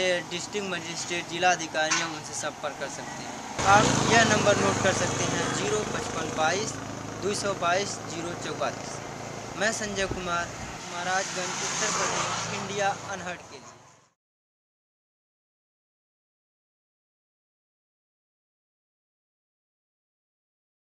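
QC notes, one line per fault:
No faults found in this audio. Nothing needs noting.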